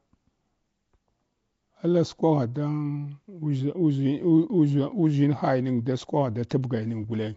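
Throughout, the speech was likely squeezed through Nellymoser compression, Flash's old microphone codec, which gives each short block a fixed, small bit budget and fills starved bands with noise. The damage is plain: a rough, hissy halo, a smeared underwater quality, and nothing above 7.7 kHz, consistent with about 32 kbps.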